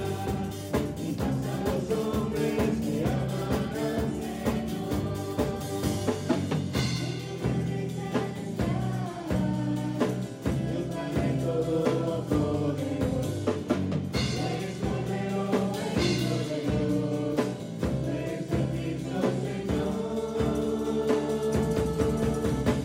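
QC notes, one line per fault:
Nothing stood out on listening.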